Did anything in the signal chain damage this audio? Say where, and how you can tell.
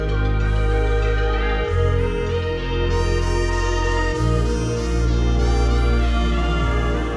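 No, no stage damaged it.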